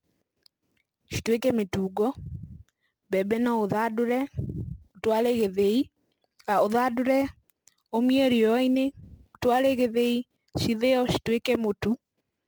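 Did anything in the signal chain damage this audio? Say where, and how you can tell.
Yes, at the converter: sample clock jitter of several microseconds adds hiss that rides the speech throughout, roughly 25 dB down, louder on bright, steep sounds and vanishing in pauses.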